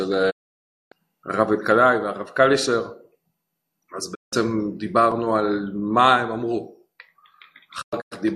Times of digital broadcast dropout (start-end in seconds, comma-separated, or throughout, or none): 0.29-0.93, 4.13-4.34, 7.81-8.16